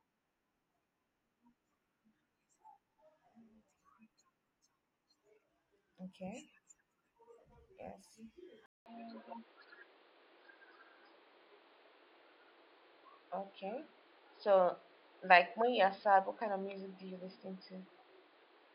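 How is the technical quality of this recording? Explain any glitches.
There's one real glitch. At 8.66 s the sound drops out for 200 ms, then comes back duller with nothing above 5 kHz, a few dB shifted in level, and a new noise floor. That's likely an input switched to a poorer device.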